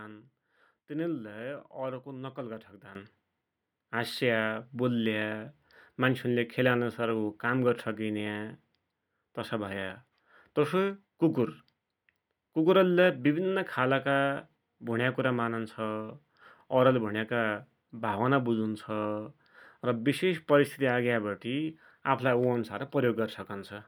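At 2.95 s a sudden gain jump raises the speech by about 12 dB until the end, likely from a digital gain step applied without a ramp. Unlike a speaker leaning closer or a fade, the background noise jumps at the same instant.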